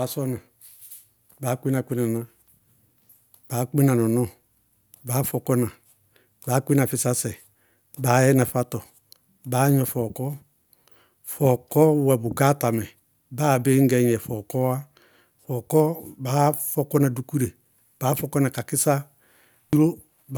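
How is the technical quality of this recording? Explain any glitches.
The technical quality of this recording is sound, with no glitches to explain.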